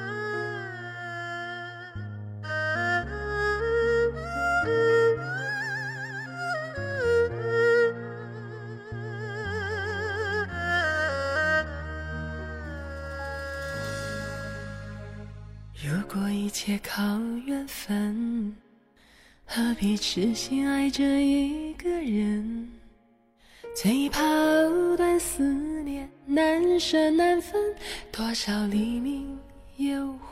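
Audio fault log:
No faults found, nothing to log.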